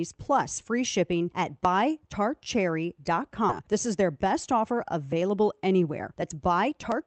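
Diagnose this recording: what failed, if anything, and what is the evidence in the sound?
Skip ahead at 3.49 s, in the network and jitter-buffer stage: the speech jumps forward with no filler, losing about a second of material. That stretch was dropped while later packets were already queued, so the two sides of the gap are spliced almost directly together.

Jitter buffer speed-up from 3.58 s to 7.06 s: after the jump the speech runs at 109% of normal rate with its pitch unchanged, sounding hurried. The buffer was holding too much audio and repeatedly cut short pitch-period slices, trimming roughly 300 ms overall.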